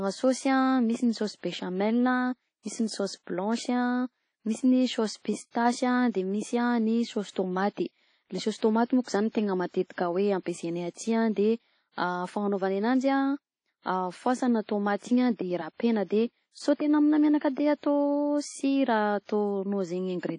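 From start to finish the speech carries plainly audible transform-codec damage: a ringing, washy quality with a hiss that swells and fades along with the talker, and no content at all above about 10.1 kHz. The likely cause is WMA compression at a low rate, one that fits roughly 32 kbps, where coarse quantisation smears noise across long blocks and zeroes weaker spectral lines. On a spectrogram this shows as a hard ceiling near 10.1 kHz and patchy, blotchy detail below it.

At 8.57 s a pre-echo appears. A sharp onset lands late in a coding block, and the noise budgeted for that loud moment is spread evenly over the whole block, so it also fills the quiet stretch before the attack. The result is a short hiss for about 50 ms, from 8.57 to 8.62 s, leading into a softened, smeared onset. A waveform shows low-level fuzz rising just ahead of the transient, and a spectrogram shows a broadband haze before the attack's vertical edge.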